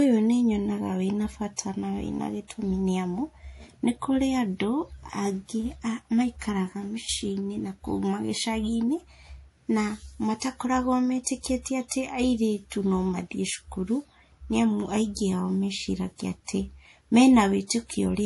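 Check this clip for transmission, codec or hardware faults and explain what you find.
Two codec faults can be heard in this speech: a steady compression texture across the whole clip, and five brief smears just before sharp onsets.

Throughout the clip the audio has nothing above 11.5 kHz and a watery, swirling quality, with sibilants turning metallic and chirpy. This is likely MP3 compression at a low bitrate, which would fit something around 48 kbps. Short of bits, the encoder cuts the treble at a fixed point and drops weak frequency lines that flicker on and off between frames. A plain low-pass filter would dull the top end just as cleanly, but it would not make the remaining sound shimmer and bubble like this.

Pre-echo appears at 1.56–1.58 s, 10.40–10.42 s, 11.24–11.26 s, 11.88–11.91 s and 17.67–17.70 s. Each time a short hiss, lasting 20 to 32 ms, runs ahead of a sharp attack, and the attack itself sounds softened. 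The codec spreads its quantisation noise across a whole block, so noise sized for the loud onset also fills the quiet moment before it. This is what sets pre-echo apart from reverberation or echo, which trail after a sound. Here the noise comes before the attack.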